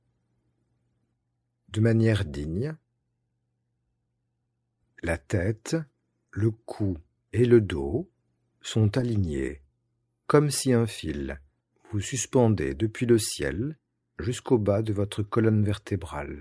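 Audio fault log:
No faults are heard in this speech recording. Nothing in it calls for an entry in the log.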